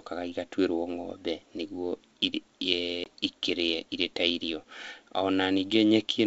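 At 3.04 s the speech drops out into a hard-edged silence lasting 20 ms, about a single packet's worth. This is packet loss on an ADPCM call. The decoder's adaptive predictor and step size lose track of the sender's while the gap runs. When the speech resumes at 3.06 s, it comes back slightly distorted. It settles within some tens of milliseconds. The wideband G.722 coding underneath stays clear.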